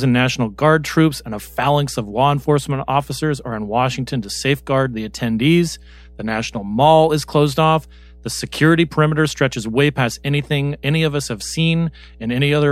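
A ground loop or a nearby transformer is leaking the power line into the signal path, producing mains hum for the whole clip: a steady 60 Hz drone with some low harmonics, sitting roughly 25 dB under the speech.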